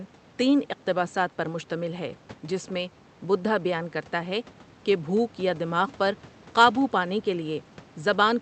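No audible technical faults here.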